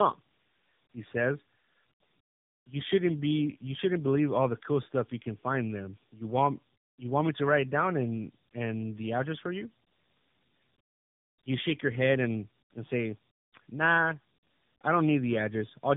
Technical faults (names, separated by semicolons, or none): tandem speech coding